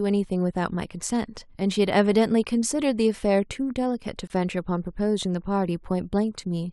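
At 4.27 s there's a gap between stream segments: a 26 ms hard-edged silence where two 4-second segments' timestamps don't meet, though nothing's actually lost.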